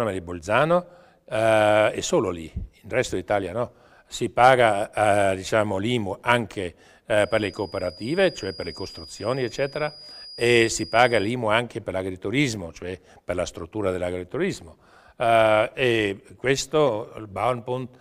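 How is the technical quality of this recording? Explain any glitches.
The recording has one glitch. From 7.13 to 11.37 s there is a feedback whistle. A speaker-to-microphone loop, likely at the edge of feedback, sustains a thin 4.9 kHz tone about 20 dB below the sound, swelling and fading slowly.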